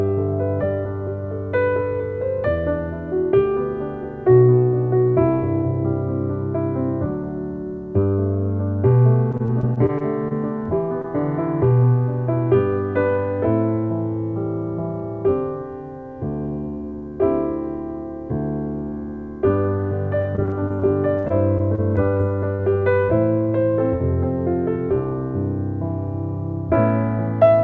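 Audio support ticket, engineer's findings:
Repeated packet loss (robotic sound), 9.32–11.06 s. Choppy stretch. Short dropouts in quick succession, longest about 25 ms, roughly 160 ms lost in total. The jitter buffer extends the last sound into each hole.

Same fault, 20.22–22.61 s. More of the span concealed. About 280 ms lost, one gap near 60 ms. Repeated concealment gives the choppy texture. The G.722 call path cuts everything above 8 kHz in both stretches.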